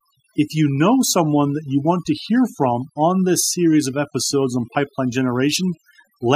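From start to finish the speech carries overdone noise removal. Someone pushed the noise reducer way too hard, so any frequency band sitting close to its noise estimate gets pulled down or shut off entirely, and the softer bits of the voice get caught in that too. You hear it as a background that drops and breaks up into little twinkling specks.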